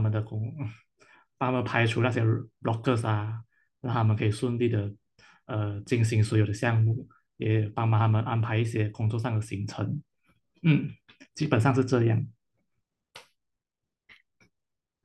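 No audible technical faults.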